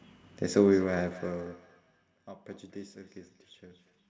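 Speech from a call, and from about 0.6 s right through to 4.07 s there's a feedback echo between two devices: each bit of speech comes back roughly every fifth of a second, thinner and more ringing each pass, sitting about 24 dB under the voice at its loudest. That's a second device in the same room playing this microphone's audio back into it, which the local echo canceller can't remove. The audio tops out around 8 kHz, as call processing does.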